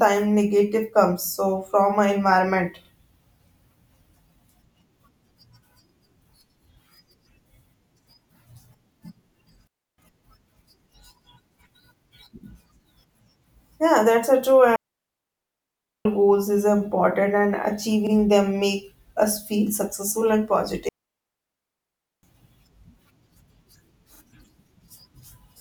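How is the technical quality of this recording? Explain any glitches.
The recording has two recurring technical faults.

Overlapping chunks: at 2.85, 5.89, 8.94, 15.02, 18.07, 21.11 and 24.16 s, a 44 ms piece repeats at each 3 s processing join, heard as a regular click or stutter. The one at 18.07 s falls just after "goals is important and".

Digital wireless dropouts: at 9.67–9.98 s, 14.76–16.05 s (after "that's a true", resuming at "goals is important and") and 20.89–22.23 s, the receiver mutes, leaving clean near-silent gaps with no noise burst.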